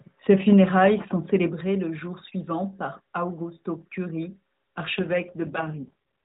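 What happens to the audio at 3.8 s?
Nothing goes wrong at 3.8 s: the speech continues intact there, carried through the AMR narrowband mobile codec path with its usual band-limited telephone character.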